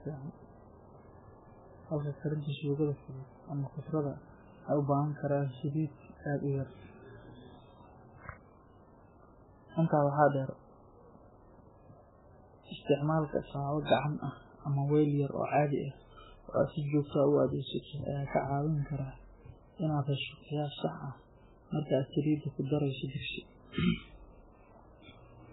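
MP3 compression runs through the whole speech clip, with nothing above 3.8 kHz and watery, swirling artefacts, likely from a very low bitrate near 8 kbps starving the encoder.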